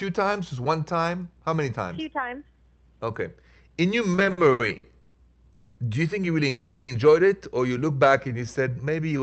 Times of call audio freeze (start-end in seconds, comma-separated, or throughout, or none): 5.54-5.79, 6.49-6.90